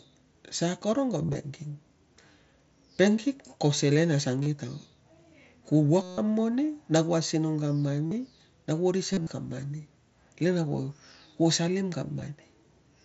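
Speech over a wideband Bluetooth headset link, with concealed Bluetooth headset packet loss at 1.23, 4.43, 6.02, 8.06, 9.13 and 12.20 s. Lost packets are filled by repeating a matching stretch of recent waveform. The longest gap, 0.16 s at 6.02 s, holds a buzzy tone, then warbles as real speech returns.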